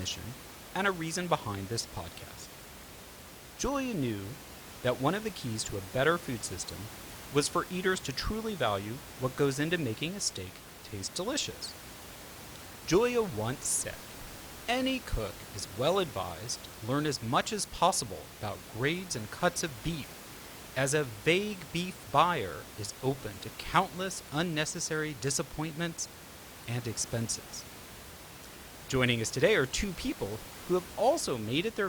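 No technical faults can be heard anywhere in the speech; the only thing under it is room noise from the recording space, sitting about 16 dB below the speech.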